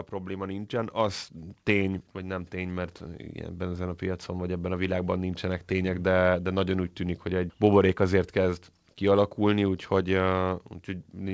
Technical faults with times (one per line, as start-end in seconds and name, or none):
0.26-1.30 automatic gain rising
2.13-4.57 automatic gain rising